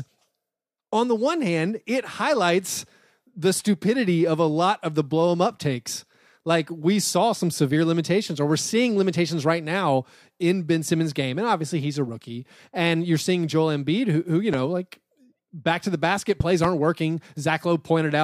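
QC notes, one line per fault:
14.54–14.56 s, loud pop: one sharp pulse, about 10 dB above the speech, after "who who you". It shows as a tall waveform spike and a thin full-band vertical line on the spectrogram.
16.40–16.67 s, loud pop: two pulses, about 15 dB above the speech, after "back to the basket". This is likely a static or switching voltage surge added on top, with the speech continuing underneath. It shows as twin waveform spikes and paired vertical lines.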